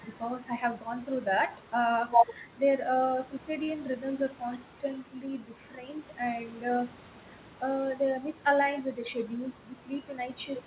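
At 3.64 s a packet arrived late and the jitter buffer ran dry, causing a short stall from a late packet. The receiver stretched the last sound for about 39 ms, then resumed where it left off, so the speech holds briefly with a faint buzz or dip through 3.78 s.

From 8.95 s to 9.38 s the buffer had built up more audio than it targets, and a jitter buffer speed-up trimmed short pitch-period pieces repeatedly, about 50 ms in total. The speech runs at 110% speed with unchanged pitch, sounding hurried, over a call-codec band with nothing above 4 kHz.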